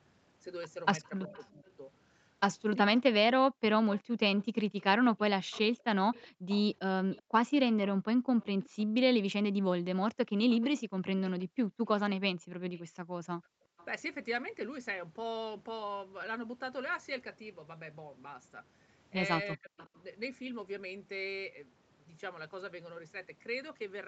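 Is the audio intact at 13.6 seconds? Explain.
No. Two faults overlap there. An echo leak runs from 1.03 to 13.85 s. Its likely cause is a loudspeaker on the far end whose echo canceller failed to remove everything its microphone picked up, so that sound was sent back down the line. You hear a faint delayed copy of the speech trailing the original by about 0.37 s, roughly 25 dB below the direct voice.

Right at 13.6 s, between 13.57 and 13.65 s, the speech is suppressed in double talk. Both sides were talking at once, and the echo canceller likely could not tell the local talker from the returning echo, so it pulled both down together. The voice briefly drops out, by as much as about 40 dB, for a total of roughly 70 ms. It sounds like a short hole punched into the speech.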